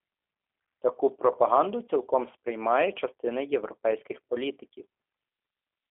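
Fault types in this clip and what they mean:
G.729 codec: The speech runs through a low-rate VoIP codec that rebuilds it from a vocal tract filter, a pitch predictor and a handful of pulses per 10 ms frame, consistent with an 8 kbit/s G.729A stream. The damage is plainly audible throughout: a rough, slightly synthetic texture on top of a telephone band of about 300 Hz to 3.5 kHz. That buzzy, model-built quality sets it apart from plain band-limiting, which narrows the sound without making it artificial.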